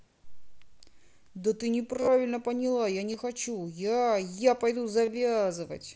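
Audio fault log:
2.00 to 2.08 s, 3.12 s and 5.05 to 5.08 s: concealed Bluetooth headset packet loss. Headset packets failed to arrive, and the phone filled each gap by repeating the closest-matching slice of the preceding audio. The first event loses about 60 ms in bursts spread over 75 ms, with runs up to 22.5 ms that give a brief buzzy, held tone and a slight warble on recovery. The later gaps of 15 ms and 22.5 ms are short runs of two and three lost frames, heard as a brief held buzz.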